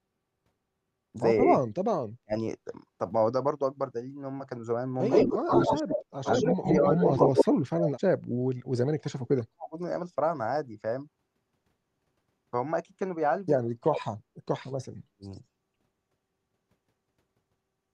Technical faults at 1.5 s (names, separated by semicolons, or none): none